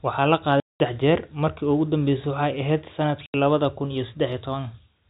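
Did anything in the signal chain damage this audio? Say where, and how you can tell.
Yes, packet loss filled with silence in the network: hard-edged holes at 0.6–0.8 s before "jeer markii ugu" and 3.26–3.34 s before "lawadha kun iyo", fitting lost 20 ms packets.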